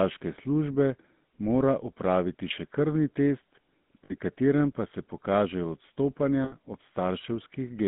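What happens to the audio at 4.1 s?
Lost GSM frames occur from 4.04 to 4.14 s. The decoder lost about 60 ms of data, which fits three 20 ms frames, and filled the gap by repeating the last good frame's settings. The sound is held briefly as a rough, metallic ring. Because the loss is well under a third of a second, it ends before fading fully to silence.

This happens inside audio already shaped by the GSM full-rate codec throughout. Its pulse-driven vocal-tract model gives the speech a plainly audible buzzy, gravelly roughness, and the band is held between 150 Hz and 3.5 kHz. That codec sound runs straight into the ringing fill and resumes after it.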